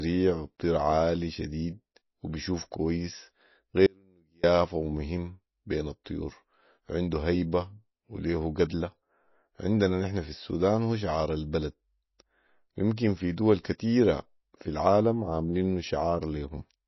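Throughout, the speech likely went through low-bitrate MP3 compression, in line with about 24 kbps. Nothing reaches above 5.8 kHz, so it sounds dull, with plainly audible watery codec damage.

From 3.86 to 4.44 s, just after "عالي شديد وبيشوف كويس", there is an audio dropout to a faint residue. The signal likely cut out while the path stayed live, leaving 0.57 s of faint sound, around 35 dB down, before "ومهم بين" returns abruptly.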